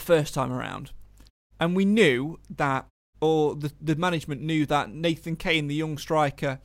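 Nothing in this speech recording stands out as a technical fault; there's simply nothing here to flag.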